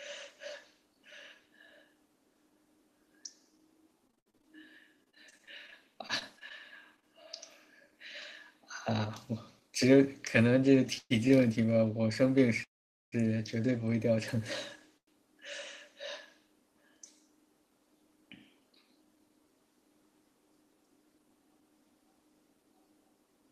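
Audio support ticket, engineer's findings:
Repeated packet loss (robotic sound), 4.07–7.04 s. Choppy speech with pieces missing. Network path dropping packets; concealment extends the previous sound across 21 holes, longest 67 ms. About 360 ms of speech lost outright, roughly 15% of the stretch patched.

Repeated stalls (stutter), 10.95–11.32 s. Speech drags and catches three times. Jitter buffer ran dry; the receiver held the last sound until data resumed, longest wait 121 ms, 143 ms filled in total. Nothing dropped. The speech is only delayed.

Jitter buffer slow-down, 11.66–11.86 s. Speech briefly drawn out at unchanged pitch, running at 86% speed. Buffer rebuilding its reserve by repeating single pitch periods, adding about 36 ms. A slight warble is possible over the stretched syllables.

Call audio freeze, 12.63–13.14 s. Sound continues briefly as a fading buzz or hiss, then about 440 ms of silence, then resumes where it stopped. 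Likely cause: packets held up in transit, emptying the jitter buffer. 488 ms inserted, nothing missing.

Short stall from a late packet, 14.98–15.09 s. One sound held too long, with a slight buzz or dip. A single packet arrived late. The receiver stretched the last sound by 96 ms, then continued from the same point. No speech lost.

Jitter buffer speed-up, 18.07–19.2 s. Speech sounds hurried, running about 7% fast at normal pitch. Buffer over target. The receiver trimmed short pitch-period pieces repeatedly, removing about a tenth of a second to cut latency.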